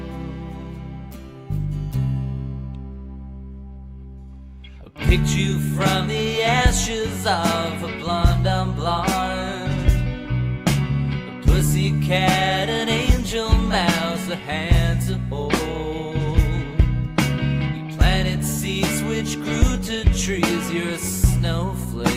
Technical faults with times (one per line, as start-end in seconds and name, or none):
none